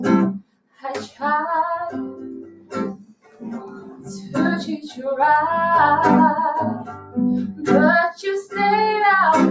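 All the way through, a speech noise suppressor is left running on non-speech sound, pushing sustained parts down by roughly 10 dB, so the level pumps and thins. Sound is cut by the noise suppressor at 0.4–0.84 s (about 21 dB down), 2.47–2.73 s (about 13 dB), 2.96–3.45 s (about 20 dB), 3.67–4.08 s (about 9 dB), 4.84–4.99 s (about 10 dB) and 6.86–7.17 s (about 11 dB), each time clipping held sound and tails. The call-style top end, with nothing above 8 kHz, is just normal microphone processing.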